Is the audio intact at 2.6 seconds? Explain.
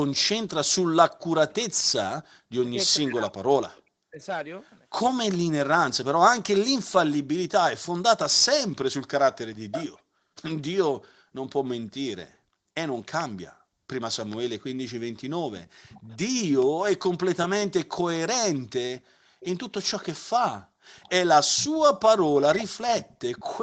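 No. Speech suppressed in double talk affects 0.39 to 4.22 s, covering 2.6 s. The talker's level drops in pieces, up to roughly 40 dB, for about two seconds in total, likely because the echo canceller could not separate the talker from the loudspeaker echo and turned both down.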